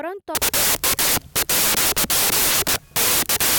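From about 0.35 s to the end, the speech turns into loud, harsh noise with the real signal faintly buried underneath. That's a wrong sample width: the 16-bit audio is being read as packed 24-bit, so each value is stitched together from mismatched bytes and only some land near the true top bits. Reading three bytes per sample instead of two also runs things 1.5 times fast, so what's left comes through sped up and pitched higher.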